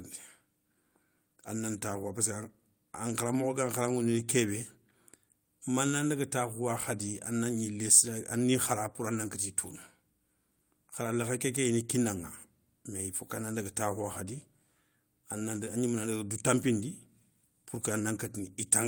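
A speech recording, and there's nothing technically wrong with it to point at, with no times or causes to give.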